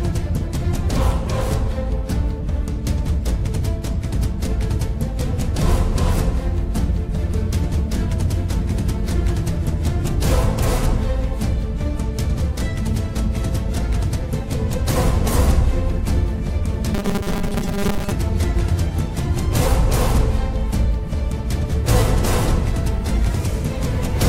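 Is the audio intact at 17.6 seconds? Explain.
No. From 16.95 to 18.13 s the sound collapses into a rigid, metallic 200 Hz buzz: robotic sound from repeated short buffers. The likely cause is audio arriving too seldom, so a 5 ms slice is looped through most of that span while new audio is skipped.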